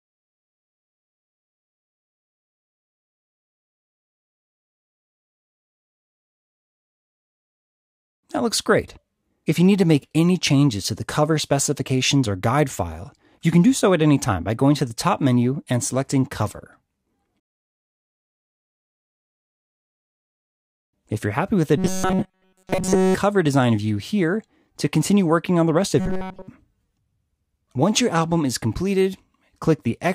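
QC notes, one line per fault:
21.78 to 23.15 s and 26.00 to 26.48 s, robotic sound from repeated short buffers: both passages collapse into a rigid, metallic buzz fixed at 188 Hz, with essentially none of the real audio coming through. The likely cause is new audio arriving too late, so playback loops a tiny fragment of about 5.3 ms over and over. That repetition rate sets the buzz while the underlying sound is skipped.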